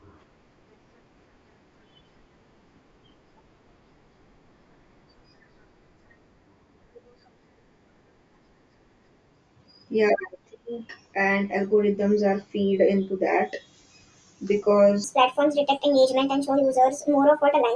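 From 15.04 s to the end of the clip at 17.76 s, the speech suddenly turns high and hurried, running about 1.38 times too fast with the pitch raised by roughly 5.5 semitones. This is a wrong sample rate fault: the samples are being played back faster than they were captured, with no rate conversion in between, so speed and pitch rise by the same ratio. The shift fits audio recorded at 16 kHz being played out at 22 kHz.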